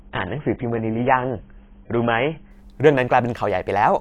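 For the first 2.51 s the speech sounds dull and smeared, with nothing above about 3.8 kHz and stronger codec artefacts, then suddenly clears without any gap. This is an adaptive stream starting at a low bitrate, consistent with roughly 16 kbit/s AAC stepping up to about 96 kbit/s.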